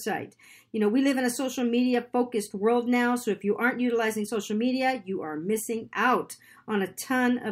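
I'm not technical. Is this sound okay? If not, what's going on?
Yes, nothing wrong can be heard in this speech recording.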